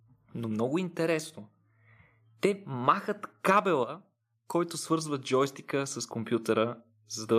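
From 2.43 s to 7.23 s the speech and background swell together by about 5 dB: automatic gain rising, the gain control slowly lifting a too-quiet input.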